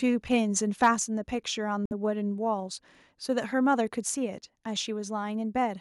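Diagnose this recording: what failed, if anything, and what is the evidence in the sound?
The microphone input gain was likely set too high, so the loudest speech peaks ran past the converter's full scale, overshooting it by about 4 dB. Between 0.82 and 0.88 s the waveform tops are sheared flat, with roughly one sample in twenty pinned at the limit. This microphone overload adds a harsh, crackling edge to that syllable, because the squared-off peaks generate high-frequency distortion products that were not in the original sound.

The call software's gain control then likely reacted to that clipped peak by lowering the microphone's input volume in a single step. At 1.02 s the level of both the speech and the background falls abruptly by about 3 dB, with no gradual fade. This microphone volume step-down follows the distorted peak by only about 0.14 s, a timing that points to call processing responding to the overload.

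On the playback side, the Bluetooth link likely stalled. Interference held back packets, and the headphones' buffer emptied before the retransmitted packets arrived. Between 1.86 and 1.93 s the sound cuts to silence for about 55 ms and then resumes. This Bluetooth stall is a clean dropout with no crossfade, which fits playback pausing until the delayed audio reached the buffer again.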